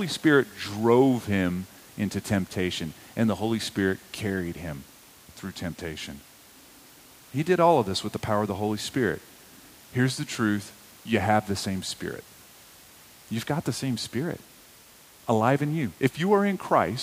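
Speech recording with no technical faults to be heard.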